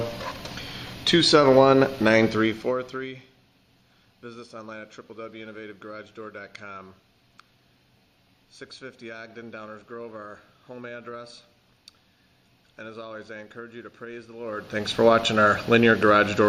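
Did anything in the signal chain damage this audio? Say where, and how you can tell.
Yes, zipper noise from a gain stage: ticking rides on the audio during the fade down of about 20 dB at 2.27–3.29 s and back up at 14.37–14.92 s. Unsmoothed level steps, roughly a hundred a second, each click.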